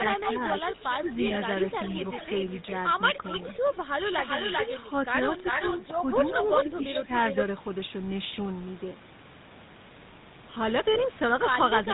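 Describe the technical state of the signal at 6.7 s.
At 6.7 s the signal passes through the GSM full-rate codec, whose vocal-tract model and sparse pulse excitation discard everything above 4 kHz. The speech sounds band-limited, buzzy and gravelly throughout, with plainly audible codec damage that fits a 13 kbps full-rate stream.

An echo leak runs from 5.44 to 7.35 s. The far side's echo canceller likely failed to remove its loudspeaker sound from its microphone, so a copy of the speech returns about 0.39 s late, roughly as loud as the original, smearing and doubling it.

Speech suppressed in double talk spans 6.64 to 7.09 s. With both sides active, the echo canceller likely could not separate talker from echo and turned the signal down. The speech dips by a few decibels in brief patches totalling a short fraction of a second.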